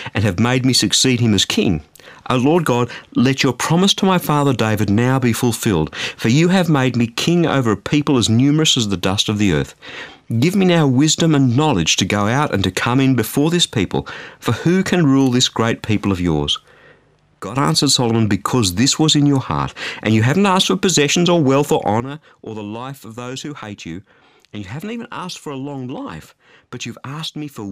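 Two sudden gain jumps here: everything drops about 11 dB from 17.4 to 17.56 s, then about 13 dB from 22.0 s, after "possessions or wealth or", to the end. Likely an unramped digital gain change.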